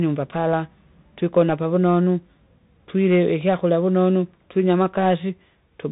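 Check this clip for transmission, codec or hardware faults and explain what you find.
One codec fault runs through the whole speech clip: the Bluetooth CVSD headset codec. It is present from start to finish. The band stops at about 3.8 kHz, so the speech sounds boxed and telephone-like. CVSD sends a single bit per sample, meaning only up or down, and adapts its step size. The rate fits a 64 kbps stream. Fast, loud high-frequency movement outruns the step and distorts. S sounds turn scratchy. A grainy hiss sits under the speech, and the damage is plainly audible.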